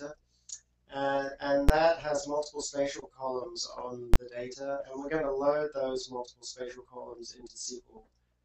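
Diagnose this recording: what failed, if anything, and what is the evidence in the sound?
Invalid numbers at full scale, from a processing calculation. Loud bangs at 1.69 s and 4.14 s. Blocks of about 10 and 20 ms were pinned at maximum output.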